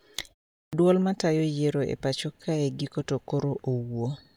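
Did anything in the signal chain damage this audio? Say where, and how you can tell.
Yes, at the playback stage. Coming out of a 0.43 s pause, the sound at 0.69 s starts abruptly, with about 38 ms lopped off its front. That's a clipped start after a pause: the output device dozed off in the silence and hadn't woken fully when the audio resumed.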